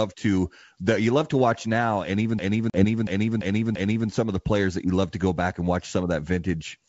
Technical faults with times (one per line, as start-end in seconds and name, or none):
2.39-4.10 system hang loop
2.70-2.85 packet loss on an ADPCM call